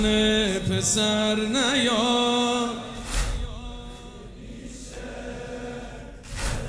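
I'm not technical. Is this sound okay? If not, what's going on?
Yes, no faults here.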